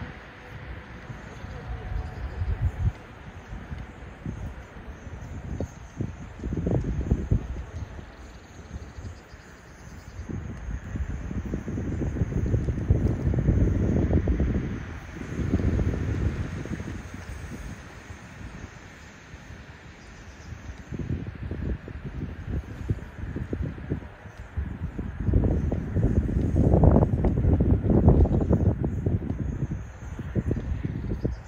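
From 10.84 to 16.92 s, a doubled audio track appears. A second copy of the sound runs about 150 ms behind the first. It is full-band and only about 5 dB quieter. It has no decay and no room colour, so it reads as a hard slapback echo. The copy cuts in and out abruptly at both ends. The likely cause is a second capture through a slower path, mixed in alongside the original.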